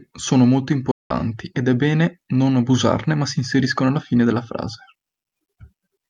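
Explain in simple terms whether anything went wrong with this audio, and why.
At about 0.91 s the speech cuts out to silence for roughly 0.19 s, then comes back at 1.11 s partway along, as if it kept playing without you. That's likely a Bluetooth dropout, where audio packets arrived too late for the headphones and got thrown away.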